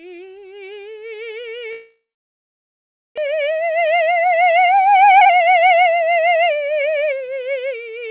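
At 1.72 s the music turns into a short buzz that fades, then goes silent for about 1.17 s before returning at 3.2 s. About 1 s of material is simply gone. This is a long network dropout, likely caused by packets that stopped arriving.

From 3.27 s to 7.27 s comes a jitter buffer speed-up. The music runs about 11% fast at unchanged pitch, and its tempo feels pushed. The receiver is cutting repeated pitch-period-length slices to shed roughly 0.4 s of delay that built up. Throughout, the band stops at 4 kHz, consistent with a G.711 mu-law call path at 64 kbps.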